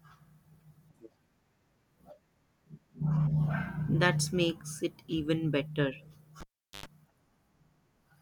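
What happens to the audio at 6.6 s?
The cable is pulled and plugged in while live, from 6.40 to 6.86 s. A pop opens 0.40 s of near silence, including 0.10 s of 50 Hz mains buzz while only the tip touches, and a second pop brings the speech back.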